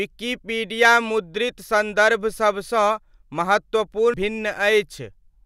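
At 4.14 s there's a quick blip from damaged data in the compressed stream: the decoder misreads corrupted bytes, loses frame sync, then recovers.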